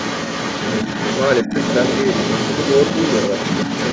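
From the very start to the end, a second voice sits underneath the speech, only a few decibels quieter. This is the other side's voice leaking through, likely loudspeaker echo the echo canceller left in the microphone signal. Unlike crosstalk or a background talker, it is continuous, tied to the call path, and shares the band-limited character of the main speech, which stops at 8 kHz.

From 1.43 to 1.54 s, the main speech briefly dips by roughly 5 dB for about a tenth of a second. This is speech suppressed in double talk: with both sides active, the canceller likely turned the talker down along with the echo. Unlike a dropout, the sound dips rather than vanishing.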